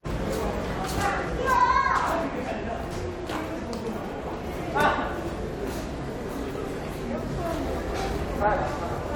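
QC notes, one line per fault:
No faults found in this clip of sounds. Nothing calls for a timestamp or a note.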